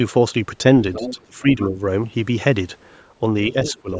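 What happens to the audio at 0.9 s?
Other side's voice leaking through, 0.93 to 1.16 s: a second voice sits about 10 dB under the talker, likely loudspeaker echo the canceller failed to remove.

Speech suppressed in double talk, 0.95 to 1.77 s: the talker's voice dips by up to around 20 dB in patches totalling under half a second, likely the canceller turning everything down during overlap.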